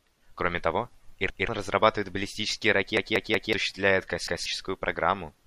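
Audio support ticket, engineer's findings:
Repeated buffer, three events in speech. 1.30–1.49 s: a 186 ms block plays twice, hard join, stutter just before "разрабатывает баллистические". About 0.2 s of new audio lost. 2.97–3.53 s: right after "разрабатывает баллистические", same block plays four times, about half a second lost. 4.27–4.46 s: one extra play, about 0.2 s lost. Playback device starving. Last buffer replayed while waiting. Block length fits an 8192-sample buffer.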